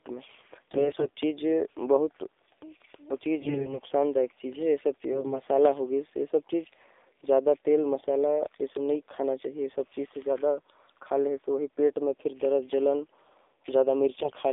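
Throughout, the speech carries AMR narrowband mobile codec coding: a band of roughly 300 Hz to 3.7 kHz, with a buzzy, synthetic edge from the vocal-tract model running short of pulses, which fits the 7.4 kbps mode. The damage is plainly audible.

AMR bit errors strike at 0.64–1.10 s, 3.40–3.79 s, 5.12–5.43 s and 14.18–14.32 s. Corrupted low-priority bits misplace excitation pulses and skew gain and spectral detail. Pitch and level hold, but the voice turns hoarse, scratchy and gargly. The error rate is several percent, nearer a tenth around 3.4 s.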